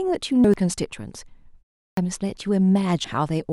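A short speech recording has two kinds of fault. Compressed frames were skipped twice: whole frames of the encoded stream never reached playback, either missing from the file or rejected by the decoder as damaged. At 0.44 to 0.63 s about a fifth of a second of speech is gone, and at 3.04 s roughly 300 ms vanishes. Separately, the output device dozed off during a pause of 0.39 s and had to wake before it could play again. That produced a clipped start after the pause at 1.93 s: the first 39 ms of the returning speech is swallowed, so the sound jumps in abruptly without its onset.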